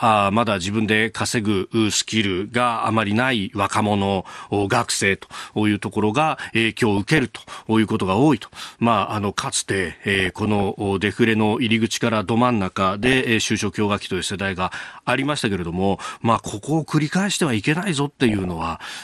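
MP2 compression runs through the whole speech clip: the sound is dull and carries a plainly audible gurgling, granular roughness, likely from MPEG Layer II coding at a low rate, which fits around 80 kbps. With so few bits to share among its 32 sub-bands, the encoder drops the upper bands and flickers them in and out. It quantises what remains coarsely, so the treble goes missing and the remaining detail sounds grainy.

DAB burbling breaks in six times: 4.63 to 4.99 s, 6.97 to 7.42 s, 10.15 to 10.85 s (the longest), 13.03 to 13.23 s, 16.34 to 16.64 s and 18.29 to 18.68 s. In each burst, a small fraction of bit errors has slipped past error correction into the coded audio. Corrupted samples put short blips of noise into single sub-bands, and corrupted scale factors make sub-bands jump in level for up to a frame, producing a burbling disturbance over the speech.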